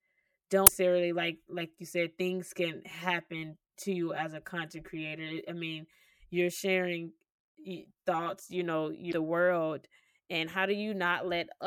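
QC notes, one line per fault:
0.0–8.47 s, channel delay (comb filtering): one channel trails the other by around 5 ms, and the mono sum cancels at regularly spaced frequencies from around 100 Hz upward, so the speech sounds hollow and phasey until "you know". A spectrogram shows fixed horizontal notch bands.
0.64–0.70 s and 9.10–9.13 s, damaged data in a compressed stream: corrupt frames make the decoder lose sync and hunt for the next header, producing brief glitches, the second right after "you know".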